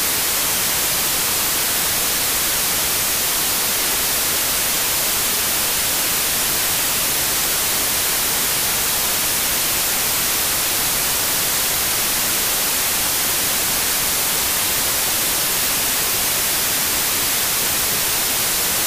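From the start of the clip to its end, the audio suffers a wrong sample width fault. Data written as packed 24-bit integers are being read as 16-bit integers, so many values are built from mismatched bytes. Only some keep the true top bits. The result is loud, harsh noise with the original sound buried inside it, playing at 0.667 times its proper speed, so pitch drops correspondingly.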